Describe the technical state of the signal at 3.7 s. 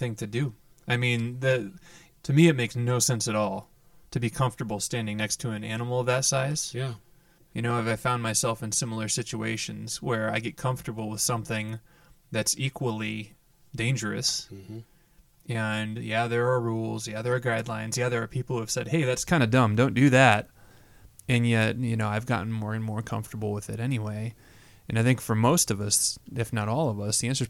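At 3.7 s you're inside a stretch of channel delay (comb filtering) that runs from the start to about 19.25 s. One side arrives roughly 5 ms late, so the mono sum cancels at evenly spaced notches from around 100 Hz up, leaving the speech hollow and phasey.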